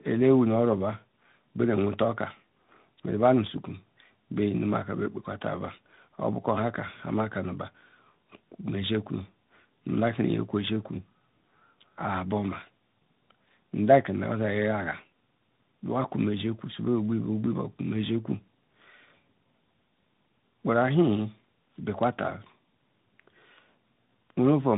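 A speech recording with tandem speech coding from start to finish. The sound has passed through two speech coders in a row. The second one worked on output already degraded by the first. Nothing reaches above about 3.8 kHz, so the sound is narrowband and muffled. The voice also sounds rough and warbly, beyond what one coder would cause. The texture points to an AMR-NB stage followed by G.726, with a G.711 link between them.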